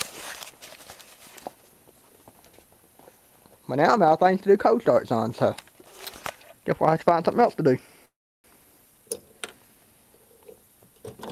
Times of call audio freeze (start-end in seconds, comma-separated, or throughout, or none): 8.05-8.47